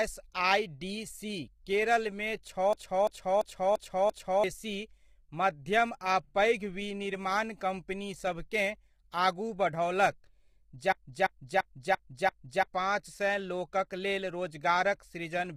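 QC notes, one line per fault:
throughout: low-delay AAC compression. The speech was likely encoded with AAC-ELD, and the heavy damage fits a bitrate around 24 kbps. Its short frames resolve the voice's pitch harmonics poorly, so the speech sounds rough and grainy, with noise filling the gaps between harmonics and a thin, synthetic-sounding top band.
2.73–4.44 s and 10.92–12.63 s: system hang loop. Each time, the computer or driver stalled while the audio hardware kept replaying one ring buffer of about 341 ms, which fits a 16384-sample buffer. The same fragment repeats exactly five times at 2.93 Hz, a slow mechanical stutter, and roughly 1.5 s of real audio is lost each time.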